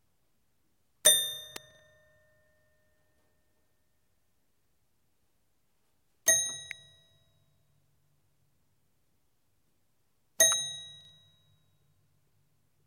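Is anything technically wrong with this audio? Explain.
Yes. Two kinds of fault can be heard.

Sharp snaps sit on top of the sound at 1.56 s, 6.71 s and 10.52 s, each a tight crack lasting only a few milliseconds and unrelated to what is playing underneath. This is an electrical switching spike. The likely cause is a nearby switch, motor or static discharge arcing briefly, with the audio line picking up that burst of interference and adding it to the signal.

Just after the first snap, from 1.71 s to 1.79 s, the sound briefly jumbles, and the same stutter returns from 11.01 s to 11.09 s. These are chunks out of order. In each case one block of about 43 ms arrived or was written one chunk late, so it plays after the block that should follow it. Nothing is missing, but the reordering leaves hard joins.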